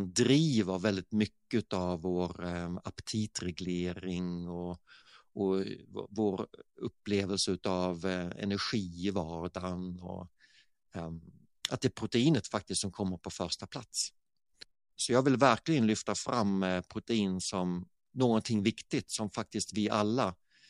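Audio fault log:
No fault found in this speech recording.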